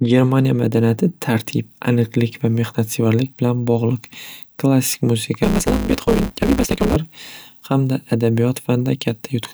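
From 5.43 to 6.96 s, after "bilan bog'liq klassik", a block size mismatch (truncated) discards each block's end, fitting 512-sample writes. Speech races 1.6 times faster with its timbre kept under a 150 Hz buzz.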